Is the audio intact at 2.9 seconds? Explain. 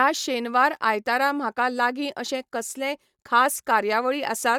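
Yes, the speech at 2.9 seconds plays through intact, with no dropout, click, distortion or other fault at that moment.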